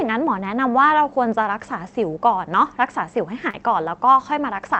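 A short speech clip that's come through a call path, and you can hear the top end rolled off around 8 kHz, which fits a wideband Opus stream. The fault is a short concealed packet loss from about 3.50 to 3.54 s: roughly 30 ms of audio didn't arrive in time, so the receiver papered over it by carrying the preceding sound forward and then blending back in. You get a quick smear there, where a small bit of the speech can get swallowed.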